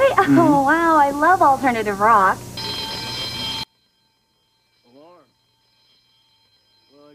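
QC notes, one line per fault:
3.63–7.14 s, one channel inverted: the sound drops by about 36 dB and stays near-silent to the end, leaving only a faint residue. Likely one stereo channel flipped in polarity, so the shared centre content cancels when the channels sum to mono.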